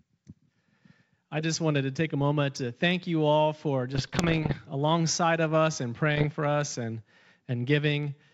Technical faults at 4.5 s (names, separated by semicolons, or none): bit errors on an ADPCM link